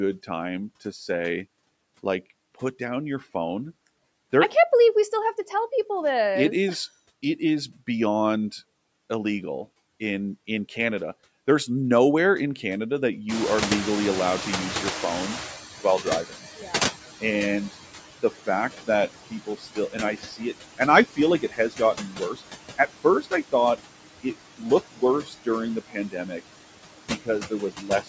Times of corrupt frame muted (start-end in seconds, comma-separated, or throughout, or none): none